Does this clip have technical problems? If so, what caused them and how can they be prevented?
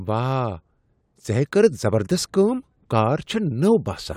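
No technical faults are audible.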